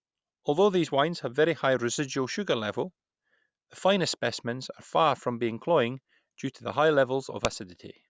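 File header played as audio at 7.45 s, just after "cloying due to high": a separate piece of the recording was joined on without its header bytes being stripped, so that short block of file data plays as samples and produces a sharp, loud click.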